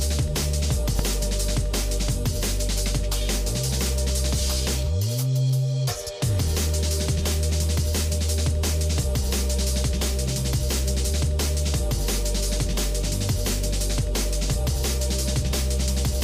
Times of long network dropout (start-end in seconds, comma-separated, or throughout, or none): none